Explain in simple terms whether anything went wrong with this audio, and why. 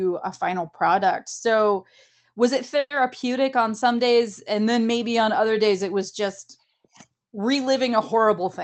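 Yes, one thing went wrong. Right after "was it", from 2.79 to 2.92 s, there is a call audio freeze. For about a tenth of a second the sound is stretched into a fading buzz, then goes briefly silent. The likely cause is that packets were held up on the way and the receiver's buffer ran dry. Unlike a dropout, nothing is lost. The speech picks up exactly where it stopped, just about 0.11 s late.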